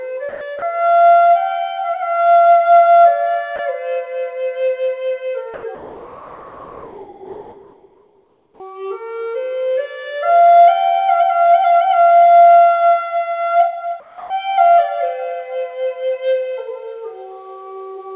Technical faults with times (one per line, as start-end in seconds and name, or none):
0.29-0.62 sound dropped by the voice detector
3.56-3.59 sound dropped by the voice detector
5.54-8.60 comfort noise in place of the background
14.00-14.30 comfort noise in place of the background